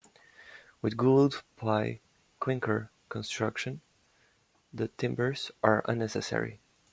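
Nothing in this speech recording stood out as a technical problem on listening.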